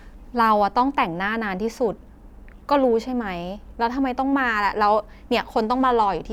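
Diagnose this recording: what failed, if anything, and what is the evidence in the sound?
Nothing failed; the sound of this speech recording gives no evidence of a fault.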